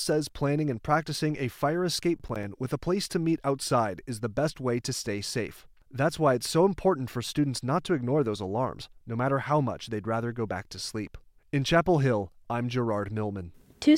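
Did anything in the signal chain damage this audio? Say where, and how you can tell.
Yes, there's processor overload crackle at the driver or buffer stage, from 2.19 to 2.43 s, right after "and practicing a fire" and before "with a place to." For about a quarter second the speech gets a gritty, tearing crackle made of a handful of tiny hard-edged silent gaps. The processor couldn't fill several short buffers in time, probably around 10 ms each, so they went out as silence and left clicks at every edge.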